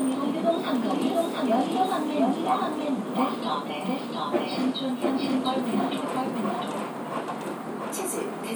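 Throughout the clip there is a doubled audio track, most likely from a slower second capture path or an edit holding two copies out of step. A full-band copy trails by roughly 0.7 s at about equal loudness, with no decay or room colour, so every sound repeats.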